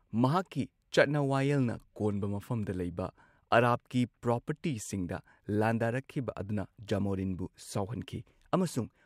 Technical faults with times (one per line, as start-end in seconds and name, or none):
none